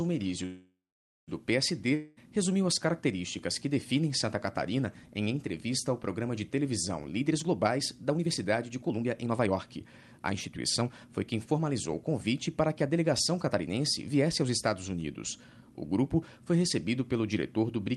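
A call audio freeze begins at 0.45 s. The sound stretches into a fading buzz and then about half a second of silence before resuming at 1.30 s exactly where it stopped, so roughly 0.82 s of gap is inserted and nothing is lost. The likely cause is delayed packets draining the jitter buffer. At 1.95 to 2.19 s comes a long network dropout: 0.22 s is bridged by a decaying buzz, and that stretch of audio never returns, so the sound picks up further along, most likely because packets were lost outright. Then a jitter buffer speed-up hurries the audio at unchanged pitch: from 7.10 to 10.90 s it runs at 116 percent, shedding about 0.7 s, and from 11.34 to 14.49 s at 106 percent, shedding about 0.2 s. The receiver is trimming pitch-period-sized slices to cut excess buffered delay. Throughout, the call codec's coding noise and a high-frequency ceiling near 12 kHz are audible, consistent with an Opus link.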